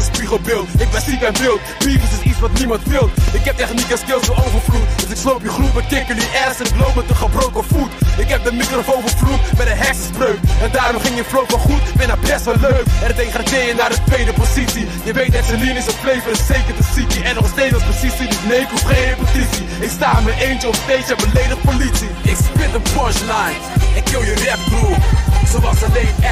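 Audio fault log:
No faults detected.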